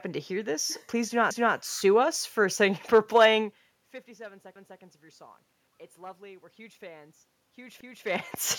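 Overlapping chunks: the speech was handled in 3-second chunks, each starting 250 ms before the previous one ended, so every join replays a quarter-second. A stutter results at 1.31 to 1.56 s, 4.56 to 4.81 s and 7.81 to 8.06 s.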